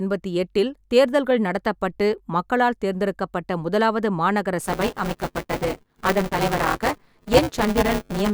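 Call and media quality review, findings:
Buffer tearing, 4.6 s to end, starting right after "மக்களால் தேர்ந்தெடுக்கப்பட்ட முதலாவது மாநகர". Steady 200 Hz robotic buzz on the speech. Playback ring buffer: writer and reader crossing each period, so about a third of each holds audio around 10 ms stale. Unlike dropouts, it makes no gaps and stops in pauses.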